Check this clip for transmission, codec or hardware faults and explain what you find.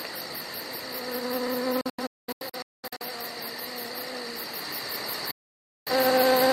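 Two digital broadcast dropouts. From 1.81 to 3.05 s, several short holes mute the sound. From 5.31 to 5.92 s it cuts again. The receiver lost frames and muted, so the audio vanishes abruptly.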